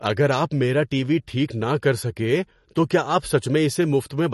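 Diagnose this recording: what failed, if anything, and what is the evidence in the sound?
The fault sits at the codec stage and runs through the whole speech clip. Nothing is present above 11.6 kHz, and the sibilants carry a watery, swirling texture, plainly audible, with smeared onsets. Likely MP3 compression at a starved bitrate, which fits roughly 40 kbps: the encoder dropped the treble at a fixed cut-off and let weak frequency lines flicker between frames. A simple low-pass filter would dull the top without that shifting, metallic churn.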